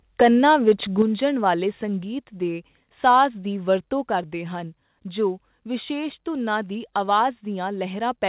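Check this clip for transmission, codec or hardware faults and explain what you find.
Two kinds of fault are present, heard over a call path whose sound stops at 4 kHz, which fits G.711 mu-law at 64 kbps.

Microphone overload occurs from 0.21 to 0.72 s, from 1.00 to 1.02 s, and from 3.06 to 3.22 s, just before "ਦੀ ਵਕਤੋਂ ਕਰਦੇ ਹਨ". The peaks go about 7, 1 and 3 dB past the converter's limit. The likely cause is input gain set too high, so the converter flattens the waveform tops. The loudest moments turn harsh and crackly.

Microphone volume stepped down occurs at 1.02, 2.04 and 4.08 s. The last step falls between "ਦੀ ਵਕਤੋਂ" and "ਕਰਦੇ ਹਨ ਜੋ ਵਿਸ਼ੇਸ਼". Each is a sudden drop of about 5, 2 and 3 dB. The first follows a clipped peak directly. The likely cause is software lowering the input gain after detecting overload.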